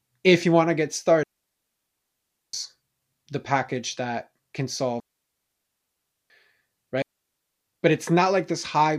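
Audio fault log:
1.23–2.53 s, 5.00–6.30 s and 7.02–7.67 s: digital wireless dropout. The speech cuts out right after "you want to get" and again after "the package that can", each time for 1.3 s, then once more for about 0.65 s. The receiver has lost too much of the digital stream and mutes with a very quick fade, leaving clean near-silence. Unlike an analogue wireless dropout, there is no hiss, static or noise burst around the holes.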